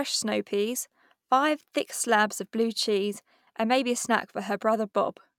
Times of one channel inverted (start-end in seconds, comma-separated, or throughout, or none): none